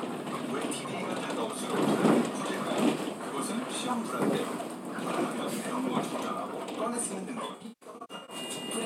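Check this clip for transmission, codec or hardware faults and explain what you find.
One fault. From 7.34 to 8.36 s there is AAC frame loss with concealment. About 576 ms of frames drop out in scattered runs. The decoder patches each gap from the last good spectrum, so the sound turns smeared and noisy. The longest run is roughly 150 ms.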